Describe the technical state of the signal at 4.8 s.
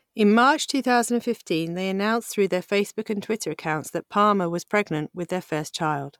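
At 4.8 s the signal is intact, with no audible technical fault at that moment.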